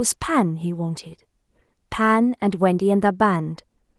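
Nothing goes wrong anywhere in this bit of speech, so there's no technical fault to point to at any moment.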